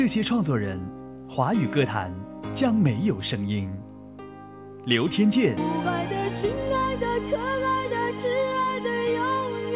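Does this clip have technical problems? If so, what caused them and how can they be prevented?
No, nothing stood out as a technical problem on listening, so there is no cause to trace and nothing to prevent.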